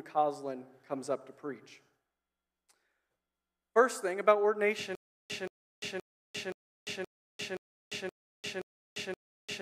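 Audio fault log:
4.95 to 9.61 s, stutter with silent gaps: from here to the very end the audio locks onto a short burst of about 176 ms, plays it, then drops into dead digital silence for roughly 348 ms before the same burst comes back. That cycle repeats nine times on a steady 523 ms beat. It's most likely a stalled player or stream re-sending its last fragment on each retry and then running dry, so whatever should have played through that stretch is simply gone.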